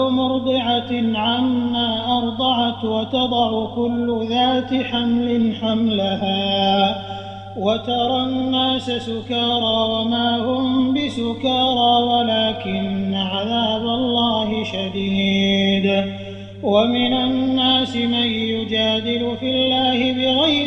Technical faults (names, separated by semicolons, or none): none